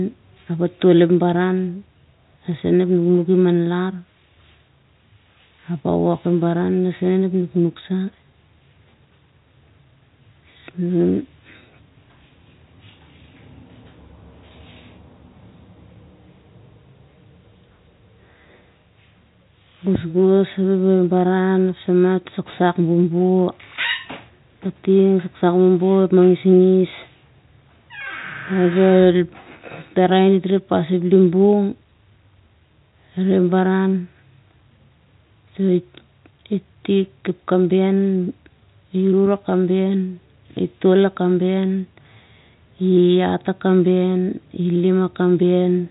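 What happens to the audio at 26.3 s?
Nothing goes wrong at 26.3 s; the speech carries on intact through that moment, with the same telephone-band sound of G.711 coding, cut off around 3.8 kHz, that it has throughout.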